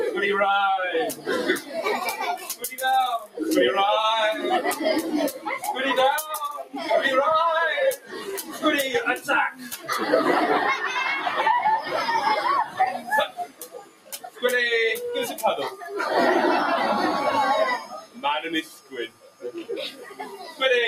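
A noise suppressor applied to music or sounds runs throughout, treating steady material as noise and swinging its level by around 10 dB, so held sound pumps and thins.

Sound cut by the noise suppressor follows at 1.13–1.8 s (about 11 dB), 2.36–3.39 s (about 15 dB), 6.58–6.79 s (about 14 dB), 7.96–8.63 s (about 12 dB), 9.18–9.89 s (about 9 dB), 12.64–14.43 s (about 15 dB), 15.71–15.86 s (about 9 dB) and 17.79–20.61 s (about 15 dB). In each, sustained or decaying sound sinks and its tail is clipped short.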